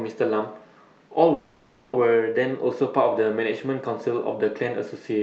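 At 1.33 to 1.95 s there's a call audio freeze: the sound hangs as a fading buzz for about 0.6 s, likely late packets draining the jitter buffer. Nothing's lost; it just picks up later, through call coding that tops out around 8 kHz.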